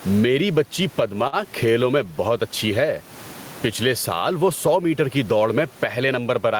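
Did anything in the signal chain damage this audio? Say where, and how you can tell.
Yes. Throughout the clip, the room noise sits about 33 dB below the speech, and the gain swings by around 15 dB, leaving loud and soft parts closer in level and the sound squashed. This is gain pumping, likely from excessive mic gain forcing a fast limiter in call processing.

At 1.27–1.35 s, between "میری بچی" and "کھیلوں میں بہت اچھی", a sound is held too long. This is a short stall from a late packet: the jitter buffer ran dry, and about 51 ms of audio was stretched before playback resumed, losing nothing.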